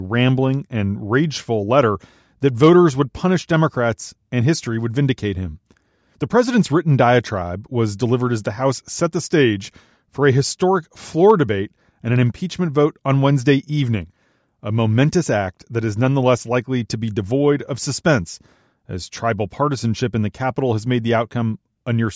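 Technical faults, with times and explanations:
Nothing technical goes wrong anywhere in this speech recording, so there's no fault to list.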